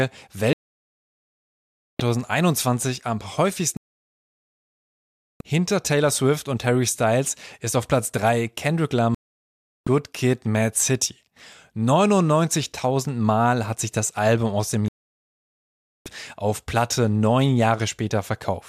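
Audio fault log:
0.53–16.06 s, digital broadcast dropout: the speech mutes four times, at 0.53–2.00 s, 3.77–5.41 s after "am häufigsten", 9.15–9.87 s, and 14.88–16.06 s after "aus dem". The receiver lost lock or discarded failed frames, holding silence until clean data returned, so those stretches are simply missing.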